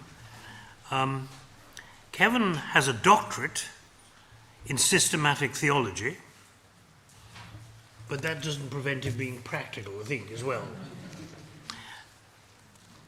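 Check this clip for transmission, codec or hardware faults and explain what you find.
One fault is present, a corrupt frame decoded at 11.17 to 11.22 s. Damaged bits in a couple of compressed frames were decoded anyway, so misread gains and codes placed energy at wrong frequencies, producing a brief, fairly quiet chirp, squeak, blip or burst of noise around -35 dBFS.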